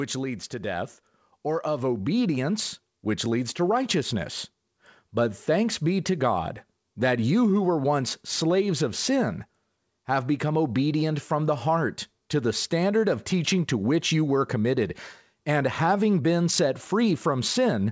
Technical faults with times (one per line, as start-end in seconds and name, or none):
0.50-4.39 automatic gain rising